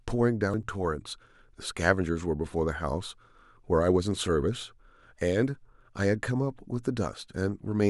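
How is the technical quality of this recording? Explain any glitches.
There is one glitch: from 0.54 to 0.63 s the speech briefly jumps forward. This is compressed frames skipped. Whole frames of the coded stream were lost or rejected as damaged, dropping about a tenth of a second.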